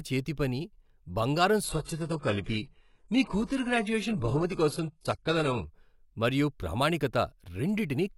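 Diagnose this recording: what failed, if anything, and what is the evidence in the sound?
Adaptive stream at a lower bitrate, from 1.64 to 5.64 s, a network-stage fault expressed through the codec. For those 4 s the speech loses its top end abruptly, with nothing above 11.5 kHz, and coding artefacts thicken, then full quality returns just before "మరియు ప్రామాణికత". Neither switch leaves a gap. The player dropped to a cheaper encoding when throughput fell, which sounds like a step from about 96 kbit/s AAC down to roughly 12 kbit/s HE-AAC, then climbed back.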